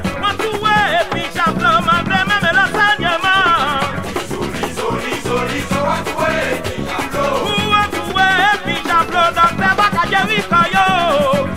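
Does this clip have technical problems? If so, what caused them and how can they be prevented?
No, there are no technical faults to point to anywhere in the clip. With nothing gone wrong, there is no cause to trace and nothing to prevent.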